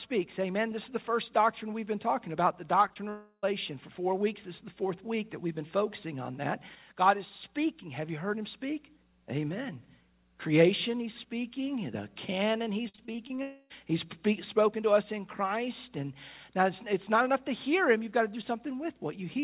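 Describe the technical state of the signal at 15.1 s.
At 15.1 s the signal is intact, with no dropout, glitch or distortion, only the band limit of the call path, which leaves nothing above 4 kHz, as expected from narrowband telephone-style coding.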